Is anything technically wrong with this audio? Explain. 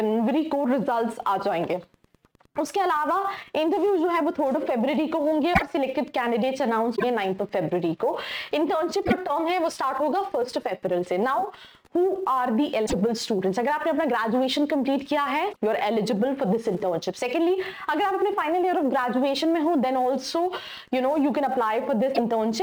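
Yes, there are three separate technical problems.

Throughout the clip there is a fine hiss or roughness that rides on the sound itself. It gets stronger on loud and bright passages and disappears in the gaps. This is sample clock jitter. The converter's clock wanders by a few microseconds, so each sample is taken slightly off time. Steeper, higher-frequency waveforms turn that timing error into larger amplitude errors, which puts the added noise roughly 35 dB below the signal.

From 0.92 s to the end there is a steady ticking about ten times a second, with occasional irregular rasps between the ticks. This is Wi-Fi interference. A nearby Wi-Fi radio sends a beacon every 102.4 ms and bursts of data in between. The audio circuitry rectifies that radio energy into audible clicks and buzz, sitting at about 35 dB below the signal.

Six brief disruptions occur at 5.53, 6.95, 9.04, 12.85, 15.52 and 22.14 s. 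At each one the sound lurches forward and smears into a chirp, a spurt of noise or a short dropout lasting roughly 50 to 90 ms. This is likely a broken MP3 bit reservoir. Frames of about 24 ms were lost, and the frames that followed borrowed data from bytes that no longer belonged to them, so a few frames decoded as garbage.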